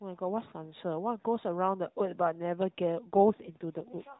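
From 3.03 s to the end, the speech turns rougher and more synthetic, with a buzzy, artificial edge. There is no gap and the bandwidth stays the same, still the narrowband AMR-NB mobile sound heard before it, cut off above 4 kHz with light coding damage. This is an AMR rate drop. The codec has switched to a lower rate, which fits a step down from 12.2 kbps to 5.9 kbps. With fewer bits left to model each 20 ms frame, the voice loses detail.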